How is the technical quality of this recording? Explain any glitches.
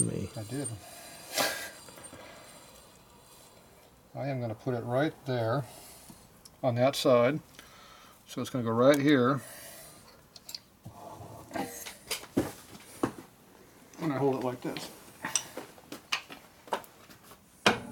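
No glitches or technical faults can be heard here.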